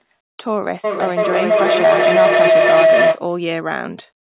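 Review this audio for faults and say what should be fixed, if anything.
A rising tone around 700 Hz swells under the speech from 0.84 s to 3.26 s, peaking at about 9 dB above the speech and pulsing roughly every 300 ms. This is feedback howl: two devices on the same call share a room, so each pass from loudspeaker back into microphone comes back louder, and the loop settles on the frequency it favours. The pulse spacing reflects the loop's round-trip delay. The whole clip is band-limited to 4 kHz, which fits a narrowband call codec such as G.711. To prevent the howl, mute the microphone or speaker on all but one device in the room, or have extra participants use headphones.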